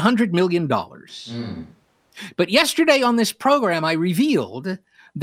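From 1.10 to 2.16 s the speech abruptly turns roomy and hollow, about 10 dB quieter, with less bass and more room noise. This is a switch to a distant microphone, likely after the close one failed. The waveform shrinks sharply, and the spectrogram thins at the bottom and shows haze between syllables.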